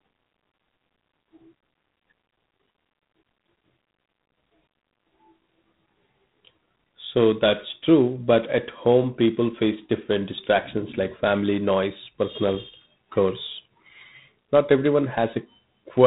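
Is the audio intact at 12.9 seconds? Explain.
No. At 12.9 s, as throughout, the speech carries G.726 ADPCM damage: coding at 24 kbit/s, each sample is a coarse difference from a predicted value, leaving a harsh, rasping hiss that rises and falls with the speech. Nothing passes above 3.9 kHz. A plain band limit would sound dull but clean, without this level-tracking grit.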